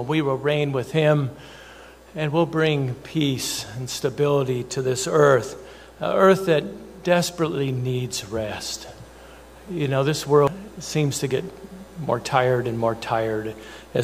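At 10.47 s there is damaged data in a compressed stream. A short stretch of the encoded bytes is wrong. The decoder misreads those frames, loses sync and hunts for the next valid header. It comes out as a brief chirp or blip.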